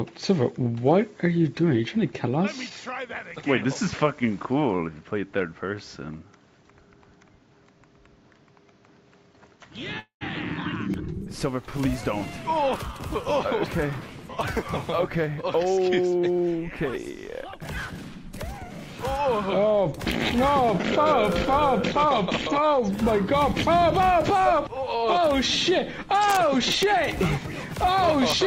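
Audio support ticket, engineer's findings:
Input switched to a poorer device, 0.0–10.94 s. Band-limited, dull and boxy, nothing above 7.6 kHz. Faint added noise floor about 45 dB down. Level shifts by a few dB. Opens this way, then clears at 10.94 s with no silence at the switch. Likely cause: capture routed through a second mic or a headset call profile, with its own narrower response and noise.

Call audio freeze, 9.99–10.23 s. Last sound held as a fading buzz, then about 110 ms of silence. Resumes where it stopped, with nothing lost. A gap of about 214 ms is inserted and the delay grows by that much. Likely cause: packets stalled in transit and the jitter buffer ran dry, so the receiver concealed the gap by extending the last frame.

Jitter buffer speed-up, 22.59–25.33 s. Playback runs at about 106% and sounds hurried, with pitch unchanged. Roughly 200 ms trimmed in total. Mechanism: the buffer was overfilled, probably after a burst of late packets. 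To pull latency back to target, the receiver repeatedly cut short pitch-period-length segments.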